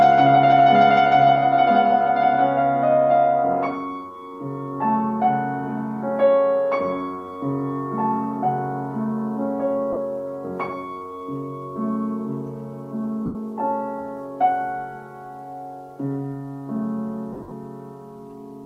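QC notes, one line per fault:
9.93–9.97 s, 13.26–13.35 s and 17.33–17.51 s, lost LE Audio frames: each gap turns into a brief hissy, grainy smear where the sound's tonal detail dissolves. It lasts about 38 ms at 9.93 s and 90 ms at 13.26 s. The last event is broken, with losses scattered over 180 ms and the longest run around 50 ms. The LC3 decoder filled each gap by replaying the last good spectrum with randomised signs, which makes the smear, and faded it as the loss went on. The gap lengths fit 7.5 ms frames.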